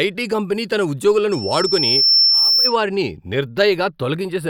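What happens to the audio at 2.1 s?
At 2.1 s the speech is in the middle of a loudspeaker feedback squeal that runs from 1.31 to 2.76 s, starting just after "ఐటీ కంపెనీ తన". A microphone is picking up the speaker it feeds, and at 5.4 kHz the loop gain exceeds one, so that tone grows by itself over roughly a second until it sits about 5 dB above the speech. On a spectrogram it is a single bright horizontal line at 5.4 kHz that thickens from left to right. The waveform envelope swells steadily instead of following the syllables.

Underneath, the channels are drifting apart. They run on clocks that disagree by roughly 20 parts per million, so the delay between left and right slowly grows, reaching well under a tenth of a millisecond by the end. Summed to mono, this produces comb-filter notches that creep slowly through the upper spectrum, giving a slow flanging. On a spectrogram of the mono sum these appear as gradually sliding dark bands.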